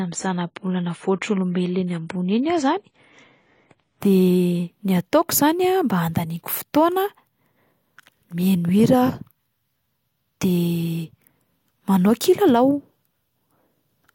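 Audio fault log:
0.0 to 4.0 s, adaptive stream starting at a low bitrate: the speech sounds dull and smeared, with nothing above 10 kHz and stronger codec artefacts, then brightens abruptly at 4.0 s without a gap. The player began on a low-bitrate rendition, consistent with about 24 kbit/s AAC, before measuring the connection and switching up to one around 96 kbit/s.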